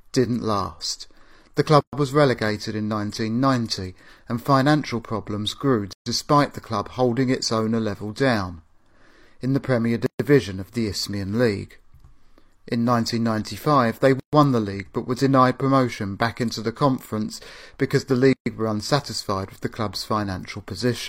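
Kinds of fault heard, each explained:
Gap at a join of encoded pieces: short silences of about 0.12 to 0.13 s cut into the speech every 4 s, at 1.81, 5.93, 10.06, 14.20 and 18.33 s, the first between "didn't last the" and "was relegated in". Each comes from separately encoded segments joined with their start delay and final-frame padding left in.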